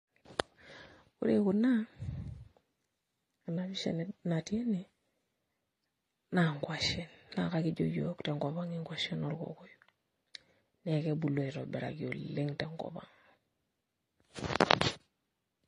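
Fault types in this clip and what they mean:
Transcoding between lossy codecs: the speech has nothing above 10.6 kHz and carries two layers of coding artefacts heard together throughout, which points to a low-bitrate MP3 encode likely re-encoded to AAC-LC at a similarly low rate, each stage adding its own damage.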